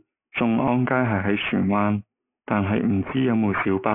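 Aliasing runs through the whole clip. The speech appears to have been resampled to a much lower rate with no anti-aliasing filter first. The band stops hard at 3 kHz, which fits a new rate of 6 kHz. Energy that sat above 3 kHz was not removed. It folded back down into the band at false pitches. The folded energy sits roughly 15 dB below the speech. Sibilants sound gritty and metallic, with a harsh buzzy edge.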